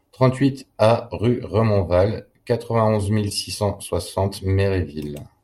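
At 3.30 to 3.33 s, just before "six cent soixante", the speech is interrupted by a short chirp-like burst of noise, lasting about 28 ms. This is a corrupt frame decoded: flipped bits in the compressed stream were not caught, and the decoder played a few damaged frames anyway. Misread gains and codes put energy at the wrong frequencies for those frames, and the burst peaks at roughly -20 dBFS.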